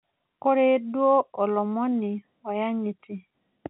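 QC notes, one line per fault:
Nothing to log here, since the speech arrives over an ordinary call path using G.711 mu-law at 64 kbps, with the band topping out at 4 kHz as expected, and no faults turn up anywhere in it.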